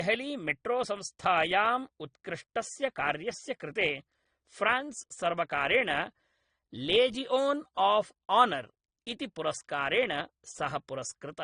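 Speech that has likely been through transcoding between lossy codecs, with a low-rate AAC-LC encode (the sound fits about 32 kbit/s) re-encoded as Opus near 48 kbit/s. The Opus stage spends bits on the AAC smearing and adds its own grain, so both are heard together throughout, with nothing above 17.7 kHz.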